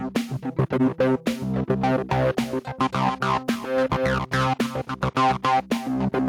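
Input gain likely set far too high, with a fast limiter clamping each loud sound, causing gain pumping throughout: the gain swings by around 15 dB, flattening the dynamics.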